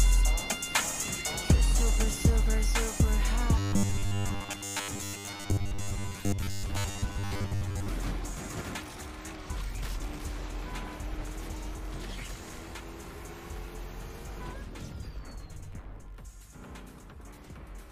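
From 3.58 to 7.88 s the sound turns into a rigid metallic buzz fixed at 100 Hz: robotic sound from repeated short buffers. Audio likely arrived too seldom, so a 10 ms slice was looped over most of the span. Unlike dropouts, no silence occurs.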